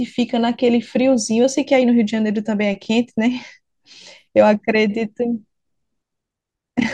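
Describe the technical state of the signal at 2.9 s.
Overlapping chunks at 2.85–2.87 s: the speech was handled in blocks of about 3.0 s, and the next block begins before the previous one has finished, so roughly 21 ms of audio is played twice at the join, heard as a brief click or stutter.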